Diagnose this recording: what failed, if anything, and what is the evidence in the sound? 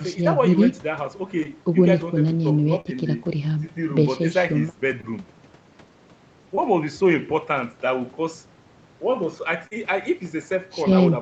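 Short concealed packet loss occurred at the network stage, at 1.43, 2.81, 5.01, 6.55 and 9.67 s. Each gap, about 20 ms (40 ms at 2.81 and 9.67 s), is bridged by the decoder extending the preceding sound. The result is a brief smear or wobble, not the silence of a hard dropout or the sharp edge of a click.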